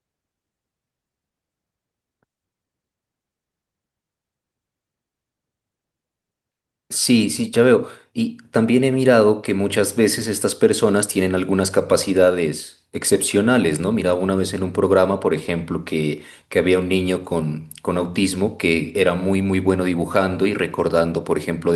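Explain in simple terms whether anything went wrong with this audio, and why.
Nothing went wrong here: the speech recording carries no audible technical fault anywhere in the clip.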